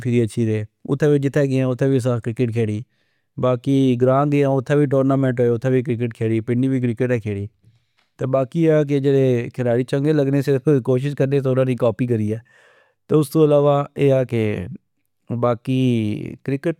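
No technical faults are audible.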